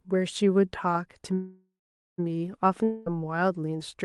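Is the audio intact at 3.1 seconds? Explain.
No. From 2.84 to 3.11 s there is a concealed gap, likely a long network dropout. The receiver fills roughly 0.22 s with a fading extension of the preceding sound, then the audio resumes with that stretch of the original permanently missing.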